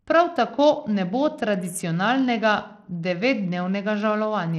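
The speech was most likely carried over a Bluetooth link using SBC compression, with the encoder starved of bits from start to finish. Its simple sub-band scheme leaves the upper bands with little or nothing, so the treble thins out and flickers, and coarse quantisation lays a gritty, aliased roughness over the sound. The damage is plainly audible throughout and points to a low bitrate, roughly 80 kbps.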